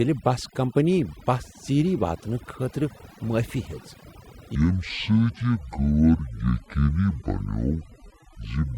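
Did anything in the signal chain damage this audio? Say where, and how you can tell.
Yes. Noise removal set far too hard runs through the whole clip, in the call processing or cleanup stage. The background sits at near silence with little twinkling specks, because quiet bands near the noise estimate get gated out, taking quiet parts of the speech with them.

From 4.55 s to the end there's a section at the wrong speed, running at 0.564 times normal, so pitch drops about ten semitones and the speech turns deep and dragging. That's likely a playback or storage step fitting this part to the wrong clock.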